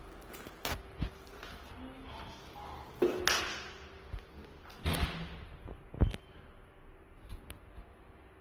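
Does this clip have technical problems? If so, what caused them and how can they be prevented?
Yes. Throughout the sound, tones turn grainy, rough and noisy while the top end still reaches about 20.4 kHz, so the band is full. Likely Opus compression in its music mode, at a rate that fits roughly 16 kbps. Bands keep their energy but are filled with folded or noise-like content instead of leaving holes, which is why it sounds gritty rather than swirly like MP3. To prevent it, encode at a higher Opus bitrate.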